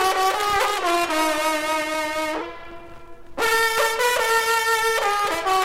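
From 0.78 to 2.41 s the sound slows and drops in pitch by about 1.5 semitones, playing at 0.92 times normal speed. This is a wrong sample rate fault, consistent with 48 kHz material played at 44.1 kHz without conversion. On a spectrogram, harmonics shift downward and events stretch in time.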